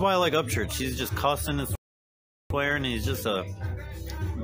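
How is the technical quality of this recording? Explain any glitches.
The recording has one clear glitch, a playback stall. At 1.75 s the sound cuts out in mid-flow and goes silent. It stays silent for about 750 ms. The sound comes back at 2.50 s. The cause is likely a player that ran out of buffered data, or a playback thread that was briefly blocked. Nothing reached the output until it recovered. To the ear, it is an abrupt gap of dead air.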